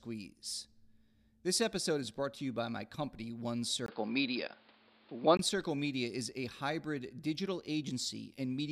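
From 3.86 to 5.39 s the speech turns dull and boxy, with nothing above 5.1 kHz, shifts in level with new background noise after a brief gap, likely an input switched to a poorer device.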